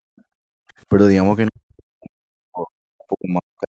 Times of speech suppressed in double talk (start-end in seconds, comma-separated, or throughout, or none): 1.49-3.70